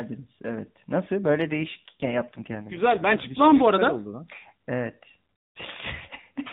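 From about 1.22 s to 3.62 s there's an AMR rate drop: the speech gets rougher and more synthetic, which fits the codec stepping down from around 12.2 to 5.9 kbps. The band stays put at the narrowband 4 kHz ceiling, with no gap, before quality recovers.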